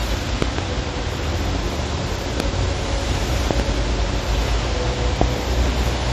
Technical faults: loud pop

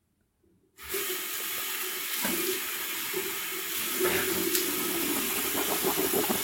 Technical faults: none

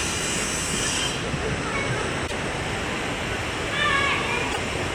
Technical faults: damaged data in a compressed stream

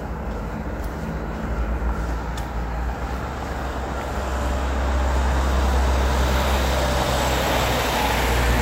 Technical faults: none

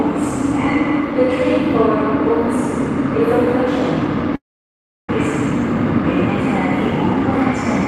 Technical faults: long network dropout

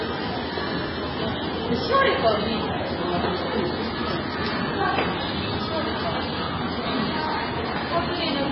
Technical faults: MP3 compression

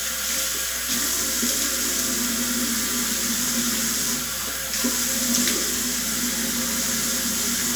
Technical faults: mains hum

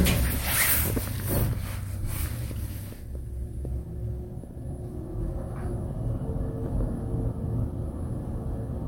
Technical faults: none

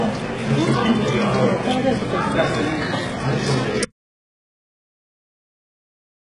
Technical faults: HE-AAC compression; audio dropout to silence

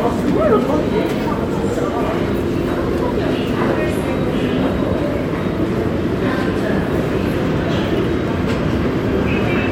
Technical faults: none

